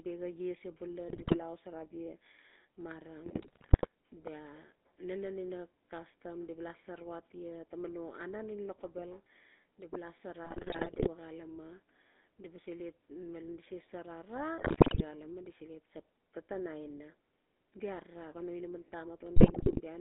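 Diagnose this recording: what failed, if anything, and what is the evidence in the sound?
The codec stage is at fault across the whole clip. The speech has the buzzy, gravelly roughness of the GSM full-rate codec, and the line band sits at roughly 250 Hz to 3.5 kHz. That roughness fits the 13 kbps full-rate coder. It models the vocal tract as a filter and drives it with a sparse, regularly spaced pulse excitation, keeping only one sample in three, so the fine texture of the voice turns into that grainy buzz.

On top of that, the network link let errors through to the decoder, and you hear the GSM bit errors as five bursts of squawking, popping and gargling: 1.08 to 1.38 s, 3.26 to 3.87 s, 10.44 to 11.09 s, 14.58 to 15.05 s, and 19.36 to 19.81 s, that last one right after "arara ngan no inaman". Corrupted filter, pitch and gain values make the decoder bend the spectrum or spike the level frame by frame, and the rough bursts point to an error rate of a few percent.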